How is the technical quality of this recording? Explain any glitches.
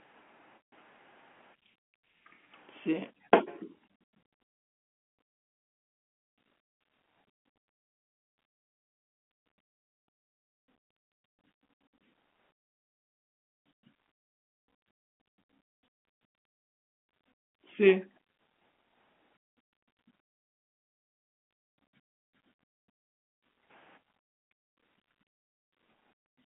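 No glitches turn up anywhere in the recording; what you're hearing is the familiar narrow sound of G.711 telephone coding, with the speech sitting in the usual 200 Hz to 3.4 kHz line band and nothing reaching above about 3.8 kHz.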